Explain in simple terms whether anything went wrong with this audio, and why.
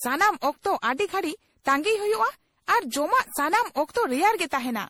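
Generation loss runs through the whole speech. It sounds swirly, hollow and smeared, likely because it was saved as MP3 around seven times over.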